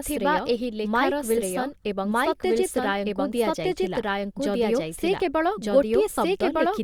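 Right from the start and all the way through, the speech has a doubled audio track: a second full copy trails about a second behind at roughly the same level, dry and unaltered. That's likely a slower capture path or an edit stacking two out-of-step copies.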